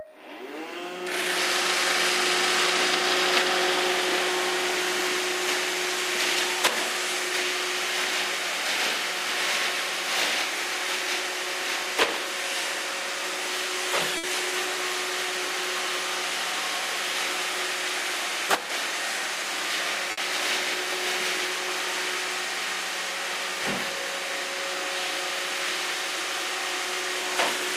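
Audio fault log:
14.17–14.26 s and 20.11–20.20 s, burst of packet loss: each time a run of packets never arrived in time. The receiver stretched the preceding sound for about 60 ms, fading it into a held buzz or hiss, then resumed with about 60 ms of audio skipped.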